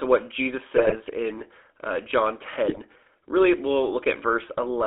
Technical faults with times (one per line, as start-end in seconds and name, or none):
0.00-4.86 GSM full-rate codec
0.76-0.97 GSM bit errors
2.68-2.79 GSM bit errors